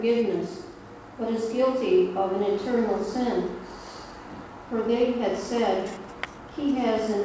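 There are no technical faults to describe; the sound reaches listeners over a WebRTC call path and has nothing above 8 kHz.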